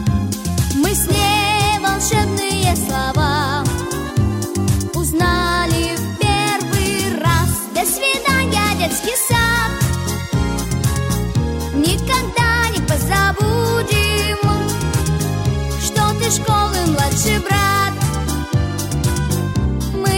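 No technical faults can be heard anywhere in the audio; the signal stays continuous and stable throughout, with no interruptions or disturbances.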